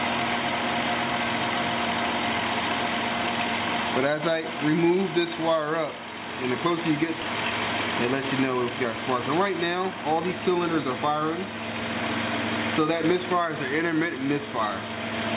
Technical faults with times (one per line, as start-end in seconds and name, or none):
7.21-7.23 skip ahead
9.71-11.23 jitter buffer speed-up